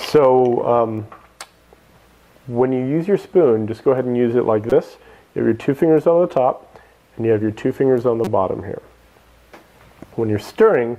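At 4.70 to 4.72 s there's a short blip, and another at 8.24 to 8.28 s. Both are a corrupt frame decoded: the decoder played a frame whose bits had been flipped, so misread gains and codes dropped energy at the wrong frequencies. Each burst lasts roughly 30 ms, which fits a single damaged frame. The first one is pretty loud, peaking around -5 dBFS, and the second is a bit quieter.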